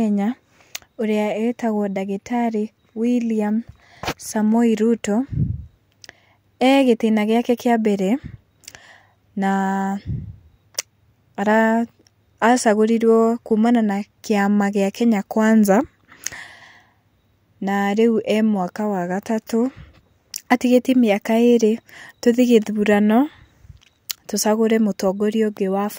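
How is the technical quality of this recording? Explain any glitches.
No glitches or technical faults can be heard here.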